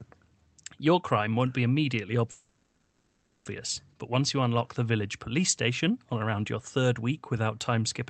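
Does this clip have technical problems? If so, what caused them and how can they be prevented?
Yes, a call audio freeze from 2.31 to 3.47 s: the speech stalls into a fading buzz, likely from delayed packets emptying the jitter buffer, then picks up where it left off, 1.14 s late. A steadier network or a deeper jitter buffer would prevent it.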